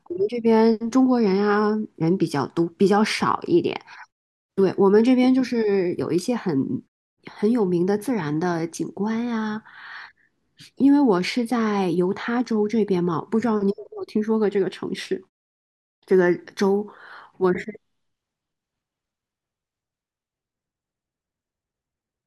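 No technical faults can be heard in this speech recording. In the pauses the output fades to silence and the background drops away, then everything returns in time for the next sound, with no speech lost.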